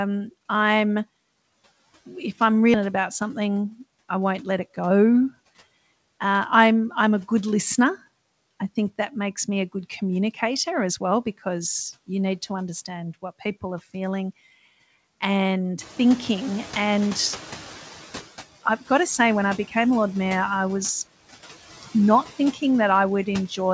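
Throughout the speech, background noise dips between phrases and swells beneath them: noise suppressor artifacts from frame-by-frame band cuts of about 14 dB. From 2.74 to 2.76 s the speech jumps abruptly forward with no gap, a skip ahead, as roughly 0.7 s of audio was dropped while later audio was already queued. Between 3.34 and 3.79 s the talking sounds hurried at unchanged pitch, running at 111% speed, a jitter buffer speed-up trimming about 70 ms of pitch periods to reduce delay. From 15.8 to 18.19 s the room noise, which rises by about 16 dB around 16 s, comes through with less reduction at first before fading over 2.39 s, settling to a cut of about 9 dB, which is the noise suppressor catching up. At 22.53 to 22.62 s a bit of speech goes faint and swallowed, dropping by up to about 9 dB, speech cut by the noise suppressor after it mistook that sound for noise.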